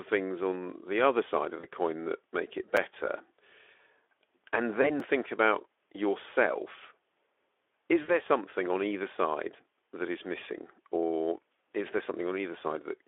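Speech carried over a narrowband VoIP link, with the band running roughly 300 Hz to 3.5 kHz and a light Speex coding texture, shows two kinds of fault. VoIP packet loss concealed by the speech codec occurs at 1.59–1.66 s, 4.82–4.90 s and 8.02–8.16 s. During these stretches the decoder fills missing audio of about 40 ms, 20 ms and 60 ms, which fits two, one and three lost 20 ms frames. It extends the last pitch and spectral shape at falling gain, so the sound turns into a buzzy tone or coloured noise that fades. It then recovers over longer spans than the loss itself. A block of digital silence appears at 2.77 s, a hard dropout of 5.33 ms that fits a 256-sample buffer not being filled in time, and again at 5.00 s for 2.08 ms. Each one cuts straight to silence and back with no fade, so it is heard as a tick or dip.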